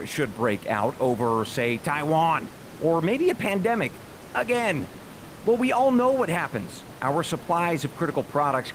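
No technical faults are audible.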